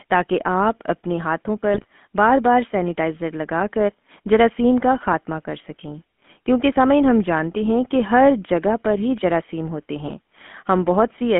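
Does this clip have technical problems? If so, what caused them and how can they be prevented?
Yes. The speech throughout has a buzzy, gravelly roughness and sounds boxed in, with nothing below about 150 Hz and nothing above 3.4 kHz. This is the GSM full-rate codec. It models the vocal tract as a filter and drives it with a sparse train of regularly spaced pulses, so the fine texture of the voice is replaced by a coarse buzz. The sound fits a 13 kbps full-rate stream. To prevent it, carry the call over a wideband codec such as AMR-WB or record the speaker locally instead of over the phone link.

Twice the speech breaks into a short squawking, gargling burst: from 1.74 to 1.85 s and from 10.04 to 10.12 s. These are GSM bit errors. On a weak radio link, corrupted bits reached the decoder, and damaged filter, pitch or gain values bent the spectrum and jolted the level for a few consecutive frames. 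Each burst lasts about 80 to 110 ms. To prevent it, improve signal strength at the handset or use a link with stronger error protection.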